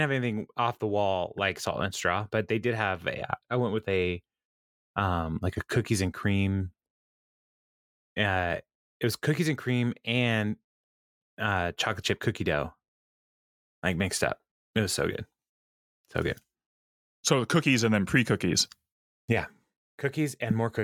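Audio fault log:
No fault can be heard anywhere in this speech recording. Nothing in it calls for an entry in this log.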